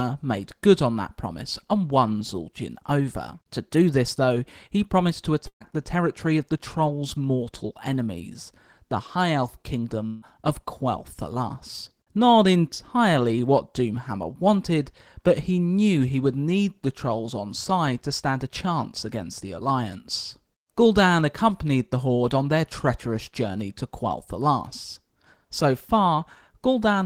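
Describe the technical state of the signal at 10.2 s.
At 10.2 s the speech is replaced by a fading buzz from 10.06 to 10.24 s, likely a long network dropout. It resumes later without about 160 ms of lost speech rather than simply pausing.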